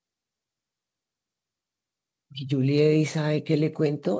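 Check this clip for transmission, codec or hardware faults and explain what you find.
No transmission, codec or hardware faults are present in this speech recording, and the absence of any content above 8 kHz reflects the ordinary band limit of the WebRTC call path, which fits a wideband codec such as G.722 working as intended.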